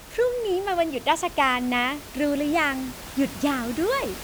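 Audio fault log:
No fault to log for this speech clip.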